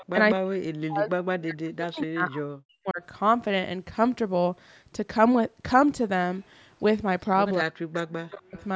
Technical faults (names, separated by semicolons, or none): echo leak; speech suppressed in double talk